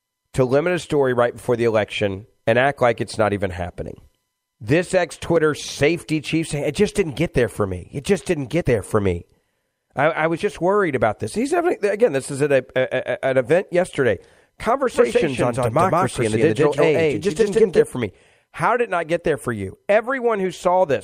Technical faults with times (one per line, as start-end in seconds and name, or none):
14.94-17.86 doubled audio track